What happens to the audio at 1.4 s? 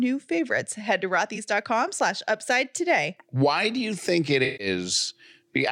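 AAC frame loss with concealment, 1.35 to 1.38 s: a single lost frame of about 21 ms was patched from the previous spectrum, leaving a brief smeared, phasey blip.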